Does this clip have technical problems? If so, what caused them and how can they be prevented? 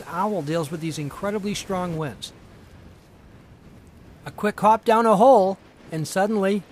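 No, nothing in this clip points to a technical fault, so there is no cause to trace and nothing to prevent.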